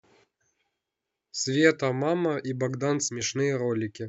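A likely channel dropout, where one side of the stereo signal went missing between 3.08 and 3.21 s, causes the one fault in this speech recording. For about 0.13 s only a single channel feeds the mono mix, so the voice content shared by both sides falls abruptly by about 6 dB, and anything carried by the lost side alone vanishes. It is heard as a brief, sharp dip in loudness that snaps back to full level.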